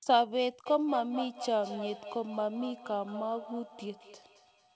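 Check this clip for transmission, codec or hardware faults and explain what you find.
One fault stands out, a feedback echo between two devices. It runs from 0.66 s to the end, with each stretch of speech returning about every fifth of a second, thinner and ringing, the loudest repeat about 11 dB below the speech. A second device in the same room is playing the call back into a microphone, and that device's echo canceller removes only its own output. The call path also cuts off everything above 8 kHz.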